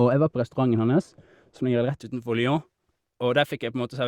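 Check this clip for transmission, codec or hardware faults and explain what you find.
There's one fault: from 0.0 to 2.0 s, de-emphasis applied wrongly. A treble cut hit audio that needed none, dropping 10 kHz about 11 dB below 1 kHz, so it sounds dull and muffled.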